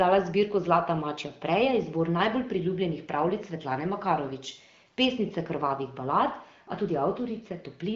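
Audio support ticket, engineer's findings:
No faults found in the speech; the audio is band-limited near 7.5 kHz with only light coding texture, consistent with the AMR wideband (HD Voice) codec running at one of its higher rates.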